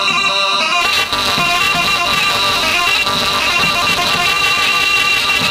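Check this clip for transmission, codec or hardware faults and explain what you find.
There is one hardware fault, buffer tearing, running from 0.81 s to the end. The writer and reader of the playback ring buffer have drifted so their positions cross inside every period. About a fifth of each buffer replays audio from a few milliseconds earlier, with hard joins on both sides. The result is a steady robotic buzz at 345 Hz, which fits a 128-sample buffer. The waveform shows regularly spaced discontinuities, and the spectrogram shows harmonic lines stacked at multiples of 345 Hz.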